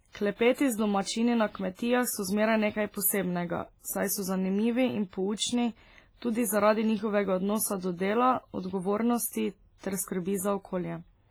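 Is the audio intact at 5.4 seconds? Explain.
No. From 5.37 to 5.39 s there is pre-echo: a hiss of about 29 ms arrives ahead of a sharp attack, softening and smearing it. The quantisation noise was spread evenly across the transform block, so noise sized for the loud onset also filled the quiet gap before it. This sits on heavy codec damage that runs through the whole clip, most likely from WMA compression at a low bitrate, which fits around 24 kbps. Its long blocks smear noise over tens of milliseconds and zero out weak spectral lines, giving a ringing, washy sound with hiss that rises and falls with the signal.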